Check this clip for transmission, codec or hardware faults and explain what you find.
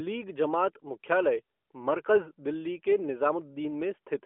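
No faults detected here.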